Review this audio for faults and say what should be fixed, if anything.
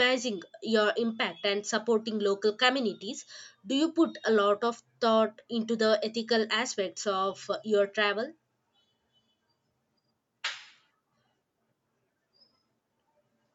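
Nothing here needs fixing. The speech has simply passed through a call's microphone processing, which trims away the deepest bass and leaves nothing above 8 kHz, and that is just how such a path is meant to sound.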